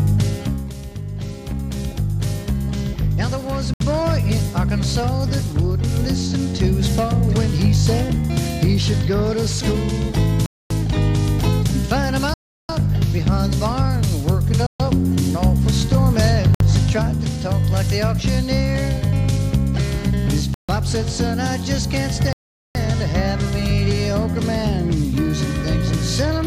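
Seven abrupt dropouts to silence occur: at 3.74 s (68 ms), 10.46 s (245 ms), 12.34 s (352 ms), 14.66 s (133 ms), 16.55 s (58 ms), 20.54 s (146 ms) and 22.33 s (424 ms). These are likely Bluetooth stalls, where interference delayed packets and the headphones' buffer ran empty until the resent packets arrived. Each gap appears as a flat line in the waveform and a blank vertical strip across all frequencies on the spectrogram.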